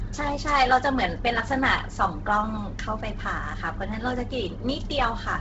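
Throughout, the speech was likely squeezed through Bluetooth LC3 compression at a low bitrate, which fits roughly 16 kbps in 10 ms frames. The codec discards much of the upper spectrum and fills it with noise, leaving nothing above 7.8 kHz and a heavily breathy, grainy edge.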